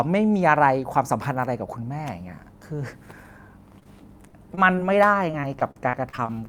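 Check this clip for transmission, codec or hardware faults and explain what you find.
Two transmission faults are present, both from packets missing on the way to the receiver.

Short concealed packet loss at 3.79–3.83, 3.83–3.87, 4.29–4.35, 4.55–4.59 and 4.75–4.79 s: 20–40 ms holes were patched by extending the preceding sound. Each heard as a brief smear or wobble, it shows as smoothed, stretched harmonics on a spectrogram.

Repeated packet loss (robotic sound) from 5.31 to 6.31 s: eight gaps, the longest 42 ms, with about 22% of the stretch filled by continuation. It sounds choppy, with repeated smeared, stretched patches in the waveform and spectrogram.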